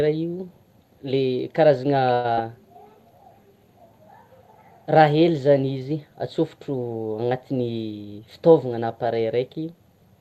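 At 2.13 to 2.27 s there's a call audio freeze: the sound stretches into a fading buzz for about a tenth of a second, likely packets stalling and draining the jitter buffer, then resumes intact.

Right after, at 2.33 to 2.39 s, a short concealed packet loss leaves a brief smear where roughly 40 ms never arrived and got patched over.

From 7.49 to 8.28 s the jitter buffer speed-up kicks in, trimming pitch periods so the audio runs about 13% fast at unchanged pitch, shedding around a tenth of a second to catch up. Through all of it the Opus call path's coding noise sits in the background.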